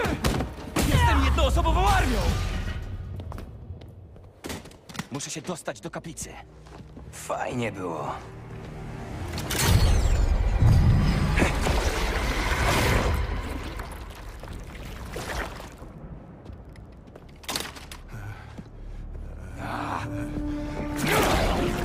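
Nothing is technically wrong with the audio in this clip, so there are no times or causes to give.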